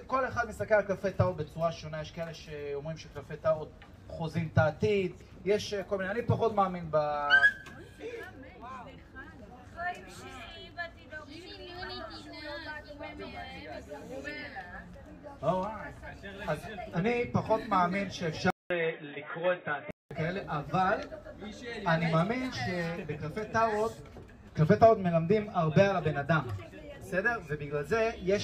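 At 18.50 s the audio drops out for about 200 ms, then comes back duller and boxier, with nothing above 3.8 kHz, roughly 5 dB quieter, and carrying a new noise floor around 35 dB below the signal. That lasts until 20.11 s, when the full sound returns. It's most likely an input switched to a poorer device partway through, such as a fallback mic or a headset's call profile.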